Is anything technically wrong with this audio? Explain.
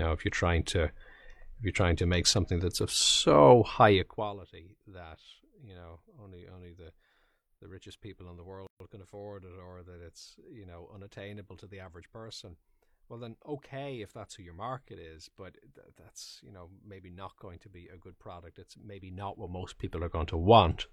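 Yes. At 8.67 s, just after "richest people in the", a gap at a join of encoded pieces cuts the speech. Two separately encoded segments were spliced untrimmed, leaving encoder delay and padding in place. The result is a 133 ms gap with smeared edges before "can afford it" resumes.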